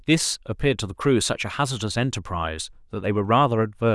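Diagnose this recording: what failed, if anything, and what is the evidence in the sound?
Nothing in the signal chain audibly failed: the speech arrives intact at a steady level, with no break, distortion or interruption at any stage from capture to playback.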